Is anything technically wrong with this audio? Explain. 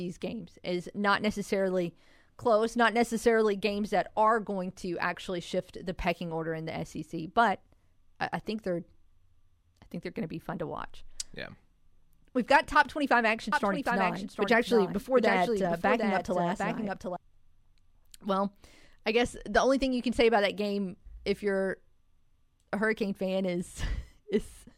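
Yes. A doubled audio track runs from 13.52 to 17.16 s. The speech is likely captured again by a slower path, or an edit holds two copies out of step, so a dry full-band copy trails about 0.7 s behind at roughly 5 dB lower, starting and stopping abruptly.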